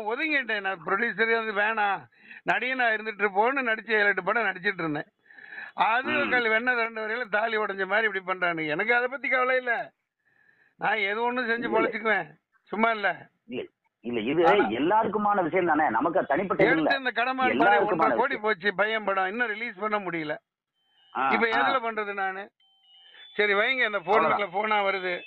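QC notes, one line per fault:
6.86–7.25 s, one channel drops out. The sound falls abruptly by about 6 dB for 0.39 s, then returns to full level. The likely cause is one stereo channel going silent before the mono sum. Shared content halves, and anything only in that channel disappears.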